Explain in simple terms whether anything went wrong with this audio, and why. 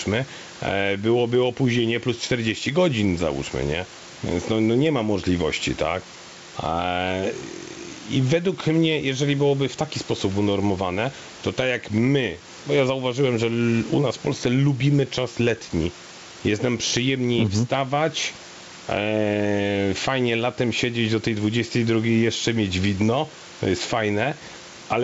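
Yes, there is gain pumping throughout the whole clip. Loud and quiet moments sound squashed together. The likely cause is microphone gain set far too high, with an automatic limiter pulling it down on each loud sound.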